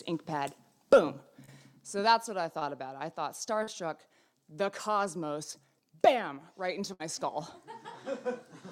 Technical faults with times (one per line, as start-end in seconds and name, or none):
1.45-1.49 short concealed packet loss
2.59-2.63 short concealed packet loss
3.63-3.69 short concealed packet loss
6.93-7.01 burst of packet loss